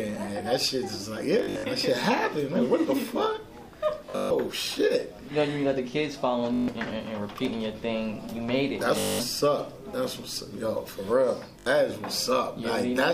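At 1.39, 4.06, 6.54, 8.99 and 11.60 s, Bluetooth stutter: late packets made the receiver replay its last buffer, producing a buzzing repeat up to 0.14 s long. The waveform shows identical short blocks, the spectrogram regular vertical striping, and then the sound skips ahead.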